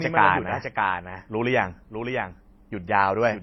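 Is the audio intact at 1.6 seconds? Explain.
No. At 1.6 seconds the speech carries a doubled audio track that runs through the whole clip. A second full-band copy, roughly 5 dB quieter, trails the original by around 0.7 s, most likely from the same signal being captured again by a slower path. It sounds like a dry, uncoloured repeat with no room tail. On a waveform the syllable envelopes appear twice, the later set smaller. A spectrogram shows the same formant patterns shifted right.

The same moment also shows transcoding between lossy codecs, present throughout. The sound has been through a low-rate MP3-style stage and then an HE-AAC-style stage, so the first stage's smearing and warbling are re-encoded and joined by the second stage's own artefacts. The highs end at a hard cut-off, likely left by the earlier, lower-rate stage. On a spectrogram this appears as a flat ceiling, with blocky, patchy energy below it where bands switch on and off.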